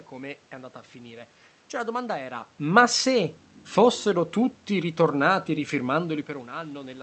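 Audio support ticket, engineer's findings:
Findings: no system fault found.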